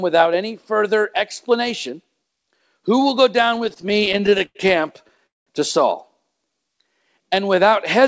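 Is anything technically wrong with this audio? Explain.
Yes, the speech has several network-playback faults.

Repeated stalls (stutter) occur from 3.56 to 4.57 s, between "will go" and "camp to", and again from 5.01 to 5.20 s. Packets arrived late, so the jitter buffer kept running dry, and the receiver stretched the last sound to bridge each gap: fifteen gaps totalling 232 ms, the longest 94 ms, then four short ones adding 34 ms. Nothing is lost, but the speech drags and hiccups.

A call audio freeze follows at 5.26 to 5.49 s. The audio halts for about 0.2 s, nearly all of it silence, then resumes where it stopped. The likely cause is packets held up in transit, emptying the buffer and pushing the delay up by that same amount.

A jitter buffer slow-down runs from 6.45 to 7.71 s. To rebuild its reserve, the receiver repeated individual pitch periods, adding 121 ms. The speech plays at about 91% speed with unchanged pitch, so sounds are drawn out.

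Throughout, nothing is heard above 8 kHz, consistent with a G.722 call codec.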